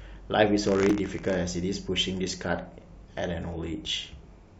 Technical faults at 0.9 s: buffer tearing; damaged data in a compressed stream

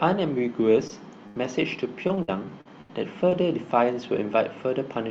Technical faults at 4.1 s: none

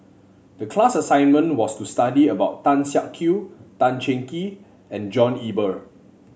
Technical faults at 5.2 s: none

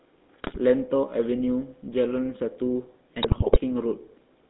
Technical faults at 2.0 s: GSM full-rate codec

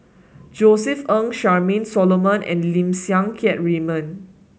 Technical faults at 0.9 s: none

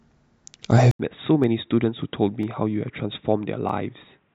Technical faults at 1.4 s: input switched to a poorer device; dropped samples

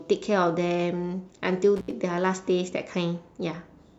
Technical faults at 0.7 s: none

